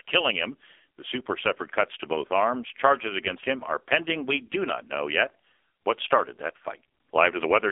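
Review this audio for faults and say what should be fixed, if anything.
Throughout, the speech sounds thin, buzzy and synthetic, confined to 300 Hz–3.6 kHz with nothing above 3.7 kHz. This is heavy AMR narrowband mobile codec damage, consistent with its low 5.9 kbps mode. To prevent it, record directly or over a wideband or higher-bitrate link rather than through a narrowband phone call.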